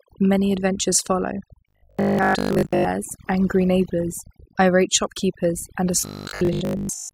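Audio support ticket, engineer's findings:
Overdone noise removal, entire clip: background pulled down, breaking up into twinkling specks. Denoiser set too strong, cutting individual frequency bands near its noise estimate, taking quiet speech detail with them.

Robotic sound from repeated short buffers, 1.69 to 2.85 s, after "adventures follow", before "angry neighbours irate shopkeepers": rigid metallic buzz at 50 Hz, roughly tracking speech. Likely buffer underrun, with playback looping the last chunk instead of waiting for new audio. The 50 Hz buzz fits a 20 ms repeated buffer, with most real audio skipped.

Same robotic buzz, 6.01 to 7.13 s, after "neighbours irate shopkeepers and", running to clip end: steady 50 Hz metallic tone. Likely the same underrun looping a roughly 20 ms chunk while most incoming audio is dropped.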